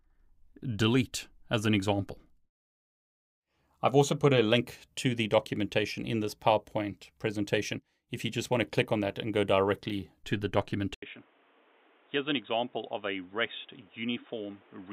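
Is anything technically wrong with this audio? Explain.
Yes. From 10.94 s the speech turns dull and boxy, nothing above 3.8 kHz, about 10 dB quieter with new background noise about 30 dB below the speech, after an 80 ms gap: likely an input switched to a poorer device.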